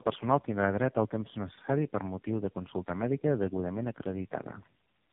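Throughout, the speech sounds rough, muffled and warbly, with nothing above 3.6 kHz. This is tandem speech coding: the sound points to three low-rate speech codecs in a row, likely AMR-NB and GSM types, each re-encoding the previous one's already degraded output.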